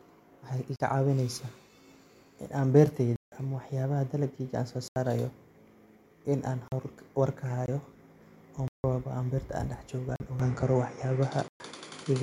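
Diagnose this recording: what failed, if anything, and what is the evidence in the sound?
Blocks of digital silence at 0.76, 3.16, 4.88, 6.68, 7.66, 8.68, 10.16 and 11.48 s, lasting 20 to 160 ms: the driver or buffer stage delivered unfilled, zeroed buffers, cutting the sound out and back with no fade.

Input switched to a poorer device at 10.4 s: the sound loses everything above 10.4 kHz, shifts level by about 5 dB and gains new background noise, with no gap at the change. The likely cause is a change of capture device.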